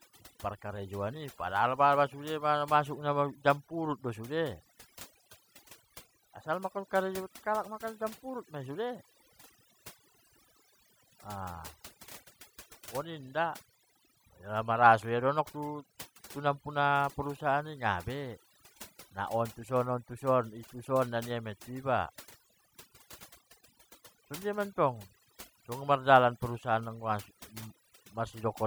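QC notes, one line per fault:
Throughout, overdone noise removal: the noise reduction was set too aggressively, so frequency bands lying near its noise estimate are pulled far down or gated off, taking quiet speech detail with them. The background falls to near silence dotted with twinkling specks. A spectrogram shows isolated bright dots scattered over a dark floor, with holes torn in the speech harmonics.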